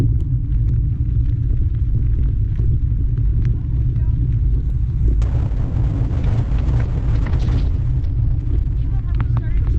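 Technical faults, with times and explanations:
5.22–9.79 s, call bitrate drop: the encoder was pushed to a far lower bitrate, which fits a fall from roughly 128 kbps to about 7 kbps. The top end collapses from 20 kHz to 6 kHz, and coarse coding leaves the sound muffled and watery, worst for 2.15 s.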